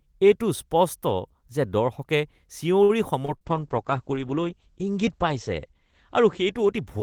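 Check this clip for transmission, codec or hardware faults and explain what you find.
Four network and codec faults occur in this speech clip, all clustered between 2.8 and 3.5 seconds, with the last one lasting to the end.

Short stall from a late packet, 2.83 to 2.92 s: a packet arrived late and the jitter buffer ran dry. The receiver stretched the preceding sound for 59 ms, then resumed where it left off. Nothing is lost, but the sound is held too long, and playback sits 59 ms later afterwards.

Short concealed packet loss, 3.25 to 3.31 s: audio never reached the decoder in time. About 30 ms was filled by extending the last sound and blending back, while 40 ms of real audio is gone. The result is a brief smear or wobble where a short sound may disappear.

Burst of packet loss, 3.36 to 3.44 s: consecutive packets were lost. The concealment continued the previous sound and faded it for 45 ms, heard as a held buzz or fading hiss. 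Playback then picks up 40 ms further on, with the part in between missing.

Call bitrate drop, 3.47 s to the end: the bandwidth estimate fell and the encoder coded far more coarsely, which fits a fall from around 32 kbps to 9 kbps. The bottom lasts about 1.3 s. Audio bandwidth narrows from 20 kHz to 8 kHz, so the speech turns muffled and rough, with a watery texture.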